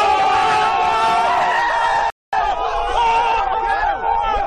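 At 2.10 s the sound drops to silence for 0.23 s, then resumes exactly where it left off: a rebuffering stall, where playback starved for data and paused until more arrived.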